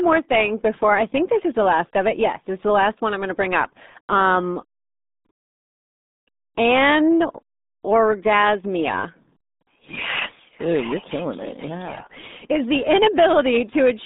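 Speech run through the RealAudio 14.4 codec for the whole clip: a dial-up-era coder whose heavy damage fits a rate of about 8 kbit/s, so the band is squeezed to roughly 200 Hz–3.7 kHz with nothing above 3.8 kHz, leaving the voice muffled and gargly throughout.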